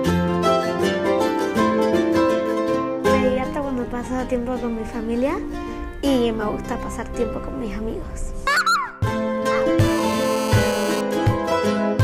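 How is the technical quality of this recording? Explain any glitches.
The recording has one glitch: GSM phone buzz from 9.80 to 11.01 s. A nearby 2G phone on a call bursts 217 times a second, and the audio circuit rectifies the pulses into a harsh, harmonic-rich 217 Hz rasp about 9 dB below the signal. It is higher and grittier than smooth 50 or 60 Hz mains hum.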